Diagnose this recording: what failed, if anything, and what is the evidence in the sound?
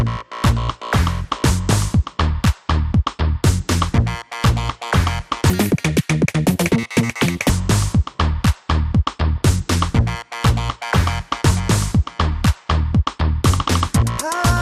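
Codec stage: the whole recording has the dull, gurgling, granular sound of likely MP2 compression at a low rate, which fits about 80 kbps, with upper sub-bands dropped.

Reception stage: DAB burbling at 1.70–1.79 s, 4.44–4.82 s and 9.38–9.47 s. Bit errors slipped past error correction and corrupted sub-band data, causing short blips of noise in single sub-bands.

Playback or editing stage: a section at the wrong speed runs from 5.50 to 7.49 s at double speed. It is hurried and raised roughly ten semitones, likely from a clock mismatch.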